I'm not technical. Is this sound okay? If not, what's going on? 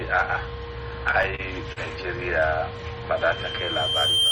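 No. There are two problems.

Between 1.11 and 1.78 s there are repeated stalls (stutter). The audio arrived in pieces late or more slowly than it was being played, so the playback buffer ran dry four times. Each time, the receiver stretched out the last bit of sound to cover the wait, about 90 ms in all, the longest wait 40 ms. Nothing is lost, but that stretch drags and hiccups.

From 3.16 s to the end there is a loudspeaker feedback squeal. A microphone picked up the loudspeaker it was feeding, and one pitch, around 3.2 kHz, kept going round the loop and growing. You hear a single high whistle swell up over roughly a second and a half until it is louder than the sound itself.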